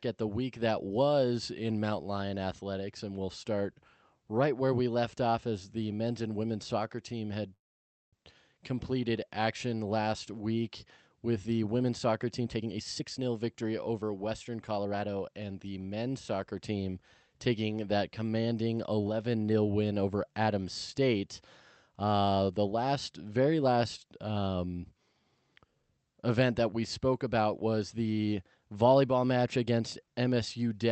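At 7.53 s the sound halts until 8.15 s. This is a call audio freeze. A short buzz fades into silence lasting 550 ms. Delayed packets likely emptied the jitter buffer. Nothing is lost. Playback resumes where it stopped, 592 ms late.

From 12.38 s to 15.55 s a jitter buffer speed-up follows. The receiver trims tiny pitch-period slices repeatedly to shed the built-up delay, roughly half a second in total. The sound runs at 118% speed with unchanged pitch and feels hurried, over the call path's 8 kHz band limit.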